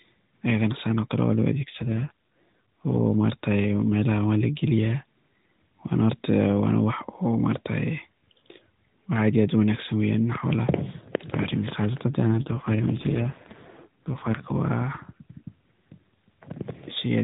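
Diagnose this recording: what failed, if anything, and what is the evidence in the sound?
The failure sits at the network-codec boundary: two AMR rate drops, from 1.54 to 3.01 s and from 12.28 to 14.70 s. In both spans the speech turns buzzier and more synthetic, which fits the link forcing the AMR-NB codec down from 12.2 to 5.9 kbps and spending the freed bits on error protection. Packet loss would leave gaps or clicks. Here the audio stays continuous, and the narrowband ceiling near 4 kHz is unchanged before, during and after each drop.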